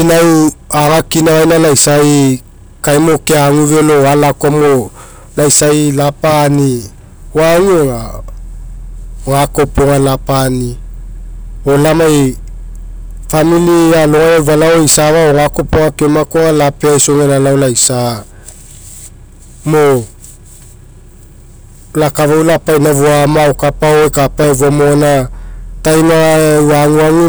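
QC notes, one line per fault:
Throughout: hard clipping. The speech is pushed about 19 dB past what the chain can pass, so nearly a third of the samples get sliced flat at the ceiling. Those squared-off peaks throw harmonics way up top, giving a harsh fuzz on every loud sound.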